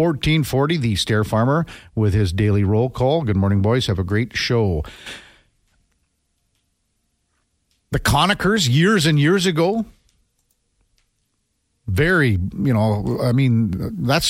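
No audible faults occur anywhere in this recording.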